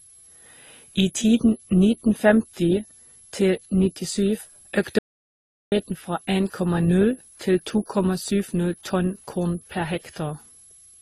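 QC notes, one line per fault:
throughout: switching supply whistle. There's a thin high whistle sitting between roughly 10.73 and 11.02 kHz, about 30 dB under the speech. A switching supply running in an audible burst mode puts its switching tone right into the band.
throughout: transcoding between lossy codecs. Nothing comes through above 12 kHz, and the speech carries two different flavours of coding smear at once. That points to a chain where it was likely encoded as AAC first and then re-encoded as Opus, each stage adding its own damage.
4.99–5.72 s: audio dropout to silence. The speech cuts out mid-flow into dead digital silence with no room tone, then resumes about 0.73 s later. The input likely dropped while the recorder kept writing silence, so whatever was said in that gap is gone.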